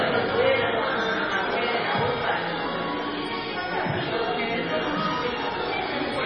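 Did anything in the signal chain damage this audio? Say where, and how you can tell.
Yes, at the codec stage: throughout, nothing remains above 9 kHz and the sound turns watery and swirly, likely heavy MP3 compression near 24 kbps. A plain low-pass would not flicker like this.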